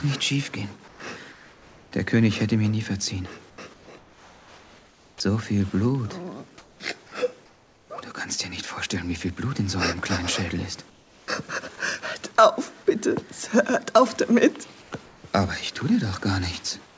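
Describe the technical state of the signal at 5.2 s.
At 5.2 s the signal is coming out of a stretch of comfort noise in place of the background, which runs from about 3.50 to 5.20 s. The real background drops away and a steady, featureless hiss stands in for roughly 1.44 s of it, most likely because the sender's voice detector judged the pause silent and stopped transmitting, leaving the receiver to synthesise shaped noise. Unlike a dropout or a mute, the gap is never silent. It is filled with noise that has lost the texture and small events of the true background.

Right at the end of that span, from 5.17 to 5.20 s, the returning sound has its onset clipped by the voice detector. The first 30 ms are missing, so the sound starts abruptly without its soft attack. The likely cause is the detector reacting late, with comfort noise covering the missed start. A packet-loss glitch or a splice click would produce a discontinuity in the middle of the sound, but here the beginning is lost and the rest of the sound is complete. 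Throughout, the call path's G.722 coding leaves nothing above 8 kHz.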